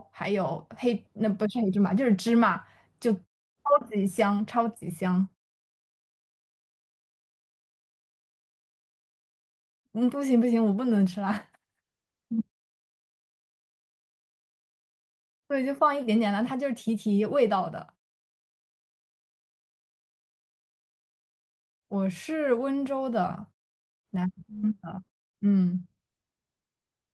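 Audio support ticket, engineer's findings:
No defects found in the speech signal: the pauses drop to silence by design, with the background muting between phrases and each phrase onset arriving intact.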